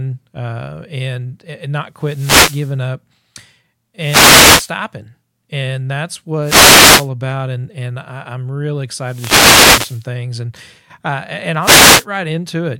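Five wireless microphone noise hits break up this speech, at 1.96 to 2.78 s, 3.98 to 4.75 s, 6.42 to 7.10 s, 9.02 to 10.09 s and 11.60 to 12.06 s. Each one is a short swish of static rising over the voice. That's the analogue FM radio link fading as reflected signals cancel at the receiver, so receiver noise climbs for between about 0.45 and 1.07 seconds each time.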